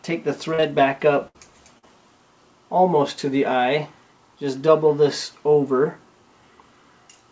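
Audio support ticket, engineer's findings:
Brief smears at 0.54–0.60 s and 0.60–0.64 s (back to back) and at 1.78–1.85 s. Short concealed packet loss: receiver extended the preceding sound across gaps of about 40, 20 and 40 ms, then blended back into real audio.

Held, fading fill at 1.28–1.36 s, then audio resumes with about 60 ms missing. Burst of packet loss: jitter buffer starved, and the decoder continued the last sound while turning it down before real packets returned. Band limit at 8 kHz across clip, fitting a G.722 call path.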